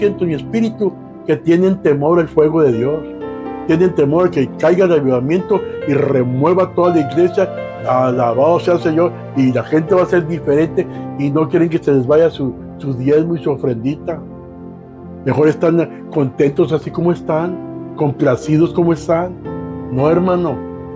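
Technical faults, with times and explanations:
Nothing technical stands out here; there are no faults to list for this recording.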